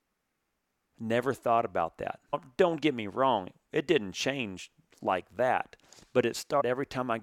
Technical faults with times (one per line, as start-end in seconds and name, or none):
2.32 compressed frames skipped
6.60-6.62 compressed frames skipped